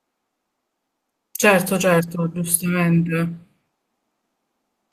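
No technical faults can be heard anywhere in the recording. There is no moment in the speech that needs a timestamp or an explanation.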